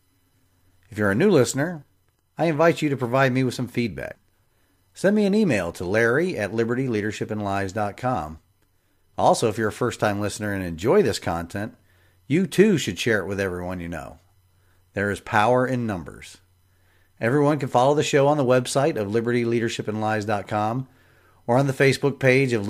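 No technical faults occur at any point in this recording.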